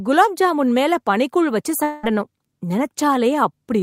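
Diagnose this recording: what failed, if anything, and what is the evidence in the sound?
Network stage. After "ஜாமுன் மேல பனிக்கூழ் வச்சு", 1.83 to 2.05 s is a fading buzz, not silence. Likely a long network dropout. The receiver stretched the last sound over about 0.2 s of lost audio.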